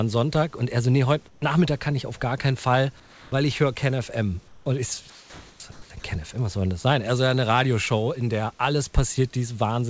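Comfort noise in place of the background appears in five pauses of this speech clip: 1.28–1.42 s (between "er so nee heute" and "kann ich auf gar"), 3.00–3.32 s (just before "ich höre"), 4.48–4.66 s, 5.10–5.60 s and 5.72–5.90 s. In each gap the natural room background gives way to a flat, textureless hiss about 2 to 3 dB quieter, then returns when speech resumes. The likely cause is discontinuous transmission: the sender stops sending during silence and the receiver synthesises a rough stand-in for the background. Sound dropped by the voice detector follows at 6.00–6.04 s. About 20 ms of speech is lost and replaced by the same steady noise for 40 ms. The sender's detector likely mistook the speech for background and stopped sending until it triggered again. Throughout, the G.722 call path leaves nothing above 8 kHz.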